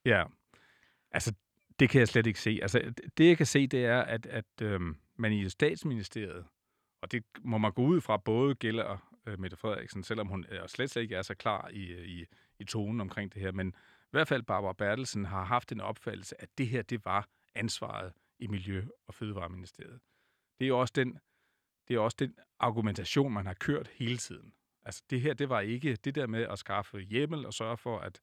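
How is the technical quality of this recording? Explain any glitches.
Good news: there's nothing to explain here, since no technical glitches turn up anywhere in this speech recording.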